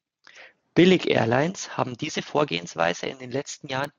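No technical faults can be heard anywhere in the speech. Nothing marks a point where the recording or transmission went wrong.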